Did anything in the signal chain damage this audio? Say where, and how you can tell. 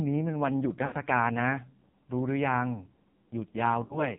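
Yes. The codec stage damaged it. The whole clip has passed through the AMR narrowband mobile codec. Nothing sits above 4 kHz, and the speech has a heavy buzzy, synthetic quality from start to finish. That degree of damage points to one of the lowest AMR-NB modes, around 5.9 kbps. At that rate the encoder keeps only a vocal-tract filter driven by a pitch predictor and a sparse pulse excitation for each subframe, so natural texture is replaced by a coarse model.

The network or radio stage caused lost AMR speech frames at two points, 0.86 to 0.94 s and 3.84 to 4.05 s. Each gap matches about 60 ms of missing audio, which fits three consecutive 20 ms frames. In each gap the sound is stretched and decays toward silence instead of cutting cleanly. After the gap the speech returns weak or rough for a moment. This happens because the decoder conceals bad frames by repeating the last good pitch and filter settings with falling gain.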